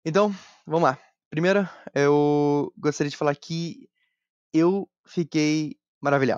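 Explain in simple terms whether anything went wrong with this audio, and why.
Nothing went wrong: the speech runs without any dropouts, glitches, distortion or other audible technical faults.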